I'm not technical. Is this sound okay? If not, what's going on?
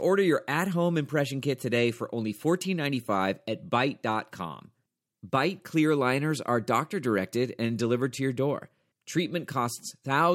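Yes, this sound is okay, and nothing is going wrong with it.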